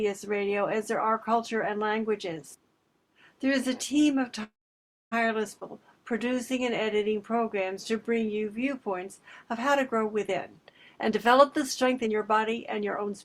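At 4.43 s the sound stalls until 5.14 s. A brief buzzy tail carries the last sound, then there's about 620 ms of silence before it resumes where it stopped. That's a call audio freeze, likely packets held up until the jitter buffer ran dry. Nothing's lost, just roughly 0.7 s of gap added.

Then a skip ahead at 5.60 to 5.63 s. Playback jumps forward with only a tiny 15 ms join, and around a fifth of a second of audio is simply gone, dropped in transit or by an overflowing buffer, so the two sides butt together almost directly.

From 6.12 to 8.40 s there's a jitter buffer slow-down. The receiver builds a reserve by repeating single pitch periods many times over, stretching things by 203 ms. It plays at 91% speed with unchanged pitch, so sounds come out drawn-out.

Finally, from 10.29 s to the end at 13.24 s there's a jitter buffer speed-up. The buffer's over its target, so short pitch-period chunks keep getting cut, roughly half a second in total. 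The result runs at 117% speed, same pitch, and feels noticeably hurried.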